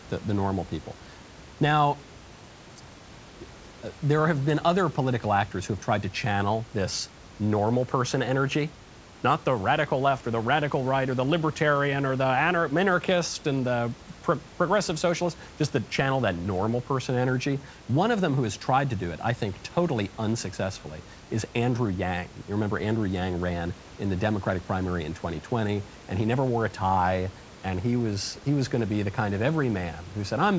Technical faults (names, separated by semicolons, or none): none